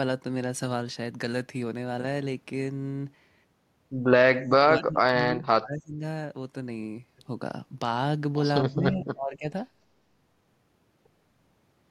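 From 4.27 to 6.03 s and again from 8.72 to 9.48 s, the speech is suppressed in double talk: it dips by roughly 35 dB, then 30 dB. This is likely an echo canceller clamping down during overlapping talk. Waveform and spectrogram both show the energy gouged out across those spans.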